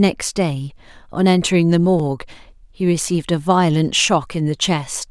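Clock drift buffer slips occur from 0.72 s to 4.55 s, about four of them, spaced a steady 1.28 s apart. Each is a brief click in the speech. The likely cause is two devices running on separate clocks that disagree by roughly 500 ppm, so the buffer between them gradually overfills or drains until a small block of around fifteen samples is dropped or repeated. The strict regularity of the clicks points to this drift.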